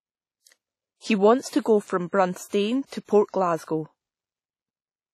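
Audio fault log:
throughout: WMA compression. The speech sounds ringing and washy, with hiss that rises and falls with the signal. Nothing remains above 16.3 kHz. The heavy damage likely comes from an early WMA encoder at a low bitrate, around 32 kbps, zeroing weak components.
3.05–3.09 s: pre-echo. A short burst of hiss runs for about 40 ms before a sharp attack, which then sounds soft and smeared. The attack falls late in a transform block, so noise sized for it spills into the quiet gap ahead.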